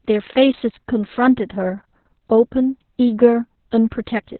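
Throughout, the speech sounds muffled, hoarse and robotic, with nothing above 4.2 kHz. This is heavy Opus voice compression in narrowband SILK mode, consistent with about 6 kbps.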